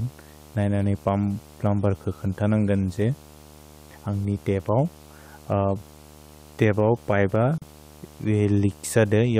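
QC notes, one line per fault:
Throughout: video or display buzz, a steady 75 Hz buzz at the picture's field rate with hash above it, sitting about 25 dB below the speech. A screen or video cable is coupling its refresh into the audio path.
7.58 to 7.62 s: gap at a join of encoded pieces, a 38 ms gap cuts into continuous speech with smeared edges, then the sound resumes where it stopped. The separately encoded pieces were joined untrimmed, so the encoder's start-up silence and last-frame padding remain.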